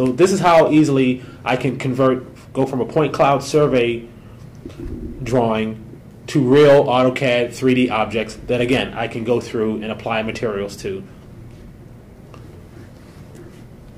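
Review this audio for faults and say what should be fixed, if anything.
Hard clipping occurs at 0.21–1.01 s, 1.48–2.07 s, 2.60–3.81 s, 5.35–5.46 s, 6.36–8.02 s and 8.72–8.80 s. The level exceeds what a stage in the chain can pass by about 4 to 8 dB, with the worst at the start and from 6.36 s, so the waveform's peaks are sheared flat. Those flat tops add high harmonics, heard as a harsh, fuzzy crackle on the loud passages. To prevent it, lower the gain ahead of the converter or processing stage so peaks keep several decibels of headroom.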